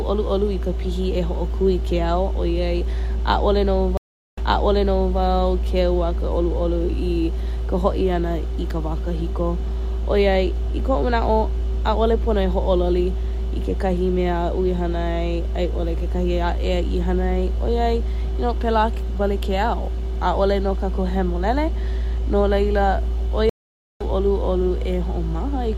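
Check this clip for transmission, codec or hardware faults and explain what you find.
Two stream reconnects break up the speech. At 3.97 s the audio drops out for 400 ms and comes back 0.8 s earlier, repeating a stretch. At 23.49 s a 510 ms gap is followed by a jump of about half a second ahead, skipping material. Both times the connection broke, the player reconnected and restarted its decoder mid-stream, so playback resumed from a different point.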